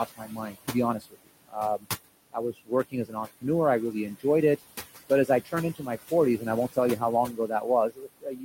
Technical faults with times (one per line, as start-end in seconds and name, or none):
0.00-8.44 noise suppressor artifacts
0.06-1.85 speech cut by the noise suppressor
2.32-3.44 speech cut by the noise suppressor
5.09-8.44 speech cut by the noise suppressor